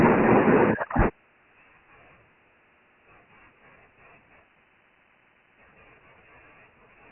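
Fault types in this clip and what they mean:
Dialogic VOX ADPCM: the speech was stored as 4-bit OKI ADPCM at 24 kbps, which points to 6,000 samples a second. Nothing survives above 3 kHz, so the voice sounds dull and boxed in, and heavy coding damage leaves a gritty hiss riding along with every syllable.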